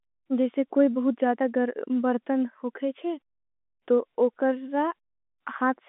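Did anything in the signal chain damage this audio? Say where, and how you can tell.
No, the speech has gone through G.711 A-law telephone coding at 64 kbps, which holds it to a 200 Hz to 3.6 kHz line band with at most a faint quantisation hiss that tracks the signal level, and no stage in the chain adds anything audible beyond that.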